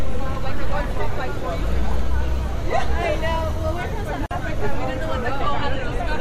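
At 4.26 s the continuous sound abruptly drops out for about 47 ms, resuming at 4.31 s exactly where it left off, with the edges of the silence blurred. This is a gap at a join of encoded pieces: two separately encoded sections were spliced without trimming, so the encoder's start-up delay and the padding on the final frame of the earlier piece both remained in the stream as a short hole.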